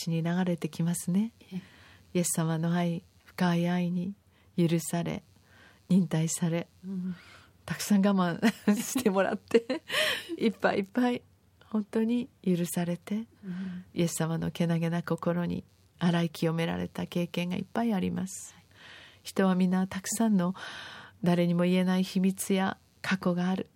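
Throughout, computer activity noise: processor load disturbs the shared ground, making a faint buzz near 150 pulses per second that follows the computer, not speech.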